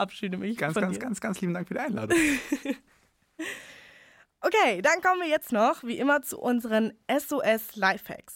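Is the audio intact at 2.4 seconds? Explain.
Yes, the speech at 2.4 seconds is intact, with no dropout, click, distortion or other fault at that moment.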